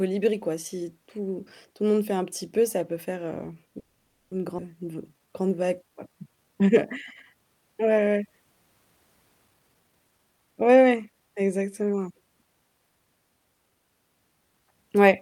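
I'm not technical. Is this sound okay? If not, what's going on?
No. Call audio freeze, 3.79 to 4.33 s: the speech stops for about half a second, then resumes where it left off, with nothing lost. The likely cause is network packets arriving late so the receiver ran out of audio.

Skip ahead, 4.57 to 4.60 s: roughly a third of a second of speech was dropped, so playback jumps straight forward to later speech.

Jitter buffer slow-down, 4.85 to 6.74 s: the receiver repeated tiny slices of speech to rebuild its reserve, so speech plays at 87% speed with the pitch unchanged.

Jitter buffer speed-up, 9.49 to 11.21 s: the receiver cut out tiny slices, about half a second in total, to reduce delay, so speech runs hurried at 130% speed.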